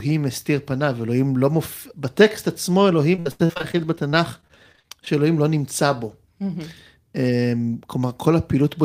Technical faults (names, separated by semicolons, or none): repeated packet loss (robotic sound)